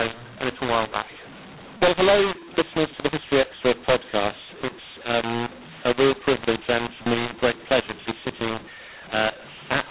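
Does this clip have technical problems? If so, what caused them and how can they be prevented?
Yes. A mu-law and A-law mix-up runs throughout: speech coded with A-law is decoded as mu-law, scrambling levels, making speech harsh and filling pauses with noise. Prevent it by having both ends of the telephone link agree on the same G.711 law.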